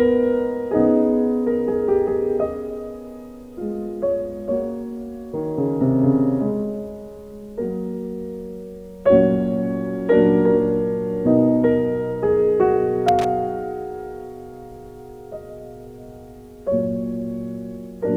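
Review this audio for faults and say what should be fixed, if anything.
Loose connector crackle appears from 13.08 to 13.25 s as a short, irregular burst of scratching. A worn or dirty contact was briefly making and breaking, chopping the signal. Unlike evenly spaced digital dropouts or clicks, its spacing and loudness are ragged and random. Reseat, clean or replace the connector and strain-relieve the cable so it cannot shift during recording.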